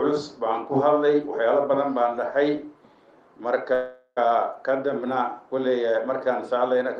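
At 3.73 s the sound stalls for about 0.45 s, until roughly 4.19 s. It's a call audio freeze: the receiver keeps smearing the last bit of sound forward as a fading buzzy tail, about 0.43 s of filled-in sound that includes a brief silence of around 60 ms, before things pick up again. Nothing seems to be lost. The audio resumes right where it stopped, so everything after that point just arrives about 0.43 s later. The likely cause is packets held up in transit, letting the jitter buffer run dry. The call codec limits the bandwidth to roughly 12 kHz throughout.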